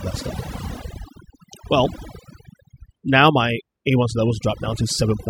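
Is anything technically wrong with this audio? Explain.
Yes, there's overdone noise removal running through the whole clip. The noise reduction was pushed too hard on a noisy source, so any frequency band that sits close to its idea of the noise gets pulled way down or cut entirely, and the softer bits of the speech get dragged out along with the noise. You can hear it in the gaps, where the background drops and breaks up into little twinkly specks.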